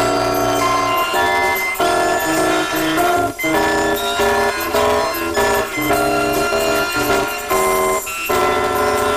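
Planar audio is being read as interleaved for the whole clip: blocks that fits 256 samples each, holding all left samples then all right, are read as alternating pairs. With blocks only 5.8 ms long, the sound becomes a robotic buzz at 172 Hz, without a clear octave shift.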